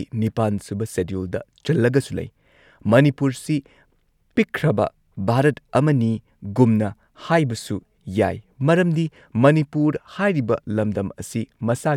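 Listening to the speech turned up nothing that stood out as a technical fault at any point.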